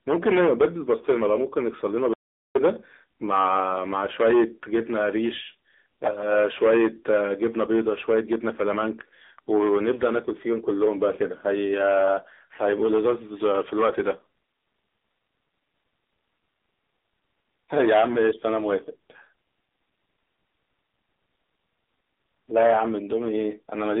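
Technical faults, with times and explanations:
Throughout, AMR narrowband mobile codec: the speech is confined to a telephone band of roughly 250 Hz to 3.7 kHz, with nothing above 3.8 kHz, and rebuilt from a sparse vocal-tract model, giving a plainly buzzy, synthetic quality consistent with a low AMR-NB mode near 7.4 kbps.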